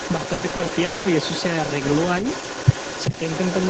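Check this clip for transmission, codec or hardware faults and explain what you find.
Two faults are audible: an echo leak running through the whole clip and a burst of repeated packet loss near the start.

Echo leak, 0 to 3.7 s: a delayed copy of the speech trails the original by about 395 ms, roughly 15 dB quieter. The likely cause is a far-end loudspeaker whose echo canceller failed to fully remove what its microphone picked up and sent it back down the line.

Repeated packet loss (robotic sound), 0.33 to 1.07 s: six gaps, the longest 200 ms, leave about half of this stretch concealed. Each hole is bridged by stretching the preceding sound, and the next hole arrives before the speech recovers. The result is choppy speech with pieces missing. The codec's 8 kHz top end sits underneath throughout.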